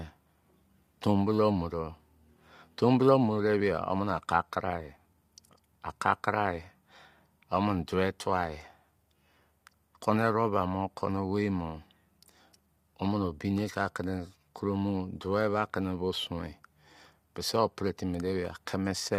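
Throughout the speech, the signal appears to have passed through a short-frame, low-delay codec, most likely low-delay AAC compression (AAC-ELD) at a rate that fits about 32 kbps. Its brief frames separate pitch harmonics poorly, so the voice sounds plainly rough and grainy, with noise filling between harmonics.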